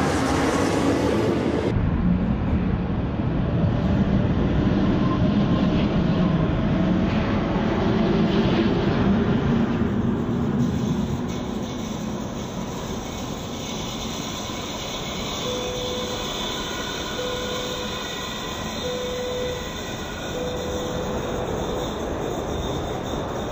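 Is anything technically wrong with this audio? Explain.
Yes. From 1.71 s to the end, the audio is affected by stereo read as mono. The left and right channels are stored interleaved, one sample from each in turn. Here they are read back in sequence as if they were one channel. Every sample pair becomes two consecutive samples, so the sound stretches to twice its length. It plays at 0.5x speed and drops 12 semitones, a full octave. It sounds slow, heavy and low.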